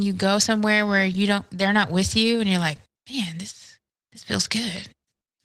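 From start to finish the speech has a rough, slightly hoarse and faintly robotic texture, with the upper range sounding muffled rather than cut off. This is Opus voice compression at a bitrate that sounds to be around 16 kbps. The codec is running in hybrid mode: a linear-prediction coder handles the band below 8 kHz and a transform layer covers the rest of the full band. Too few bits are left for the excitation, so the detail of the voice is coded coarsely.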